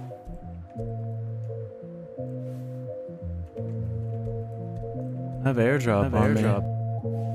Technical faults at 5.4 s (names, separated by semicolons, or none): doubled audio track